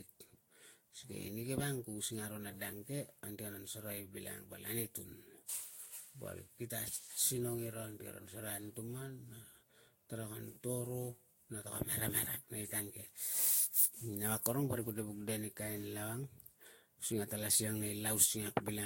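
Throughout the speech, generation loss smears consonant attacks and leaves a swirly, hollow texture with nothing above 16.6 kHz, likely from roughly seven Vorbis passes near 60 kbit/s. Unlike a single low-bitrate encode, the damage exceeds that bitrate, because each re-quantisation compounds the last.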